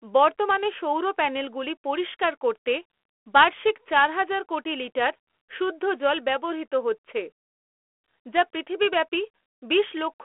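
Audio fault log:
Nothing stood out on listening to this speech recording.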